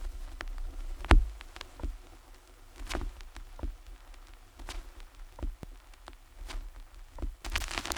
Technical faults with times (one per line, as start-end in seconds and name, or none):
none